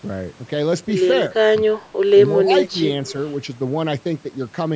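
An echo canceller, likely caught in double talk, could not tell the near talker from loudspeaker echo and attenuated both, so the speech is suppressed in double talk: it drops by around 20 dB from 1.58 to 1.78 s, then sinks again, more gently, by around 10 dB from 2.35 to 2.79 s.

At 3.06 to 3.12 s an echo leak occurs, likely because a loudspeaker-side echo canceller let part of its microphone pickup return down the line. A brief, faint copy of the speech, delayed by 206 ms and roughly 20 dB below it, slips through.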